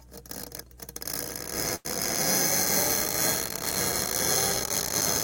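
From 1.75 to 1.87 s a sound hangs on about 94 ms too long with a slight buzz or dip: a short stall from a late packet, the emptied jitter buffer stretching the last sound before resuming.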